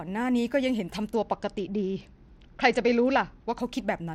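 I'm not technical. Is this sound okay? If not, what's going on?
No. From 1.16 to 3.6 s there is a Bluetooth SBC bit pool drop. The wireless link got crowded, so the phone squeezed the audio into far fewer bits to keep it playing. With so little room, the highest frequencies are thrown away and the rest is stored roughly. That's why the speech turns dull and muffled in that stretch, with a gritty, sandy noise on top, before clearing again once the link recovers.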